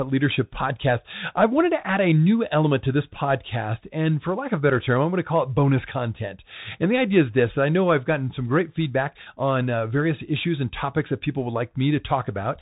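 Throughout the clip the speech has passed through a Bluetooth CVSD headset codec, coding one up-or-down bit per sample in a way that fits a 64 kbit/s link. Nothing above 3.8 kHz survives, leaving the speech narrow and muffled, with scratchy sibilants and a granular hiss underneath.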